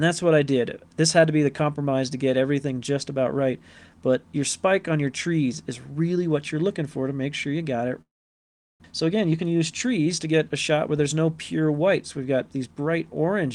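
At 8.01 s the sound breaks off. The last fragment carries on briefly as a fading buzz, then the signal is effectively silent until 8.86 s. When the audio returns, roughly 0.6 s of material has been skipped rather than delayed. The likely cause is a long network dropout: no packets reached the receiver for most of a second, and its concealment could only extend the final sound briefly before giving way to silence.

From 8.93 s to 10.89 s a jitter buffer speed-up follows. The receiver was left holding more buffered audio than its target, so it trimmed repeated short pitch-period slices to pull the latency back down, removing about a fifth of a second in total. Playback runs at 109 % speed with the pitch unchanged, so this stretch sounds slightly rushed until normal pacing resumes at 10.89 s.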